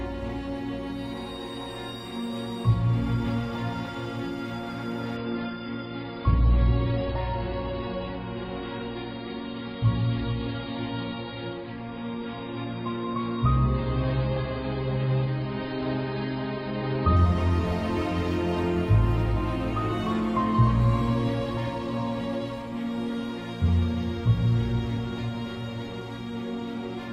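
An adaptive stream at a lower bitrate takes over from 5.17 s to 17.17 s. The connection evidently slowed, so the player switched without any gap to a much leaner encoding, which fits a drop from around 96 kbit/s AAC to roughly 16 kbit/s. The treble vanishes abruptly, with nothing above 5.1 kHz, leaving the sound dull, and coding artefacts grow more obvious. At 17.17 s the full bandwidth returns just as suddenly.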